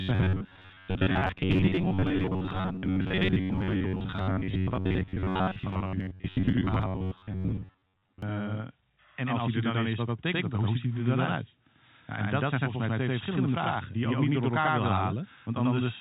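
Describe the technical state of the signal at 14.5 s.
Channel delay (doubling) is present at 14.5 s, as it is for the whole clip. One channel arrives about 92.9 ms after the other, which fits a 4096-sample buffer, and when the two are summed to mono the late copy stands apart as a distinct slap echo at equal level, so every syllable sounds doubled. The telephone-band coding, with nothing above 4 kHz, carries this doubled signal intact.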